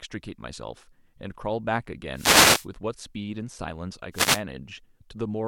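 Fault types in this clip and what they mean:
Wireless microphone noise hit: the analogue FM radio link from the transmitter to its receiver fades as reflected signals cancel the direct path, so the carrier weakens and the receiver's own noise rises into the output. In this speech clip that is heard as two short swishes of static, from 2.14 to 2.67 s and again from 4.12 to 4.42 s. The first lasts about half a second, the second about 0.3 s.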